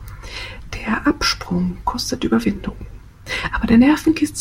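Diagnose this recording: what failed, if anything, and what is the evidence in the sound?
Nothing in the signal chain appears to have failed: the speech arrives as a continuous, intact recording with no audible fault at any stage.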